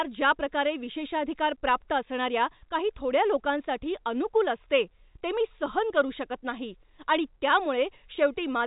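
No technical faults can be heard in the speech, which arrives over a G.711 A-law telephone path at 64 kbps with nothing above 3.8 kHz, as that format's narrow band leads one to expect.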